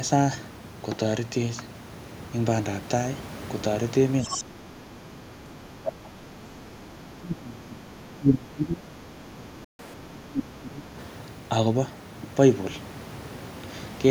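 Speech with faults that sound like a loudspeaker call. At 4.22 to 4.44 s and 9.13 to 9.36 s, a second voice comes through. It is about 10 dB below the talker at first and far fainter, around 30 dB down, the second time. This is likely the other side's voice leaking through, because the echo canceller left some loudspeaker sound in the microphone. From 4.25 to 8.85 s and 9.36 to 10.93 s, the talker's voice sinks. The drops reach about 20 dB and then about 25 dB, over roughly six and a half seconds in total. The likely cause is speech suppressed in double talk, where the canceller could not tell the talker from the echo and turned both down. At 9.64 s the sound stops dead for 0.14 s. A playback stall is the likely cause, with the player running out of data before recovering. From 9.79 to 9.94 s the audio then runs at double speed, with pitch raised close to ten semitones. That is catch-up at higher speed, resampling the backlog to win back the lost time.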